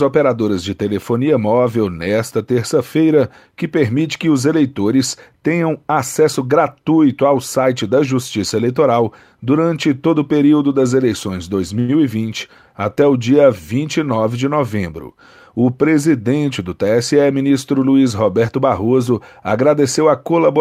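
A Portuguese speech recording with two jitter buffer hiccups. Right after "o período das eleições", from 11.79 to 11.91 s, there's a short stall from a late packet: the buffer ran dry, so the receiver stretched the last sound for about 90 ms until the packet showed up, then carried on where it left off. Nothing's lost, but that sound hangs a bit too long. Then from 14.78 to 15.00 s you get a jitter buffer speed-up. The buffer had built up extra audio, so the receiver trimmed out small pitch-period chunks, roughly 50 ms in total. The speech runs at about 117% speed with the pitch unchanged and sounds briefly rushed.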